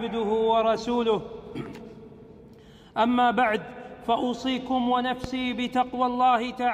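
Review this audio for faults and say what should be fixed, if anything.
A loud pop lands at 5.24 to 5.26 s, a single sharp spike standing roughly 10 dB above the surrounding audio while the sound carries on beneath it. It is likely a voltage step from a plug, switch or static discharge entering the signal chain. On a waveform it is a narrow isolated spike; on a spectrogram it is a thin vertical broadband stripe. Securing connections and avoiding switching or unplugging during recording would prevent it.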